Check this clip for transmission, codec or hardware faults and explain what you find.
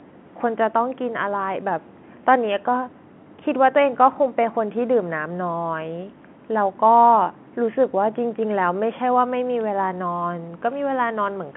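I hear no transmission, codec or hardware faults in this clip.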